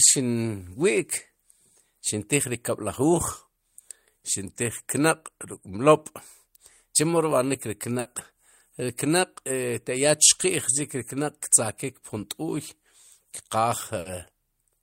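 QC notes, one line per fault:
7.99–8.08 s and 13.99–14.08 s, burst of packet loss: at each point a run of packets failed to arrive in time, leaving a gap of about 60 ms. The receiver's concealment filled it by carrying the preceding sound forward and fading it down. Playback then rejoins the stream about 60 ms later, so a short stretch of speech drops out.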